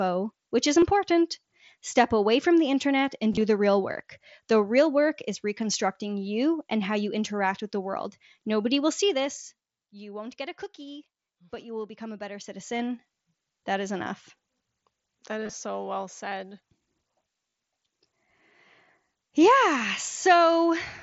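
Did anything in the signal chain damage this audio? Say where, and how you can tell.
Yes. Concealed Bluetooth headset packet loss on the wireless link: a brief patch at 0.81 s, scattered gaps across 3.32–3.41 s and 15.44–15.53 s, and a 37 ms run at 17.50–17.54 s. Lost packets were refilled with repeated recent waveform, so they sound like a short buzz and warble rather than the silent holes of a real dropout.

Zipper noise from a gain stage, in call processing or the driver: from 12.37 to 12.80 s the level changes by about 15 dB in 2 dB jumps, roughly fifteen per second, each leaving a tick.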